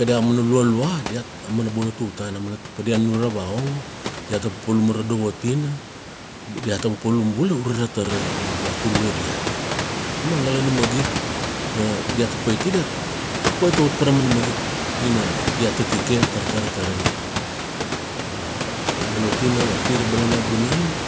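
Nothing in the speech stood out as a technical problem on listening, with the background room noise that rises at about 8 s still sitting below the talker.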